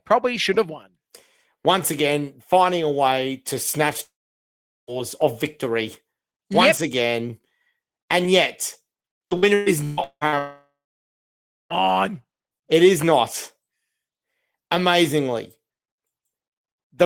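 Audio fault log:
4.03–4.90 s, long network dropout: after "a way to snatch" the sound breaks off and a brief fading continuation gives way to about 0.75 s of near-silence, then resumes at "of victory". Roughly 0.84 s of audio never arrives, likely a network stall.
9.25–10.35 s, repeated packet loss (robotic sound): six separate holes, the longest about 0.18 s, remove about 0.6 s in total. Each is patched by stretching the preceding sound, so over half the span is filled-in, choppy material.
10.38–11.73 s, long network dropout: just after the choppy stretch, reception stops again. The last sound is carried on briefly and fades, leaving about 0.96 s of silence. Roughly 1.32 s of audio is lost, likely from another network interruption.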